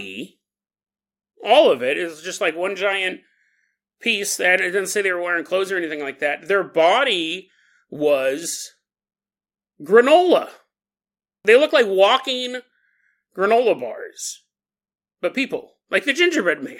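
No faults are present in this recording.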